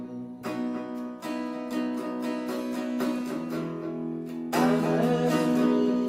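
No technical faults are audible.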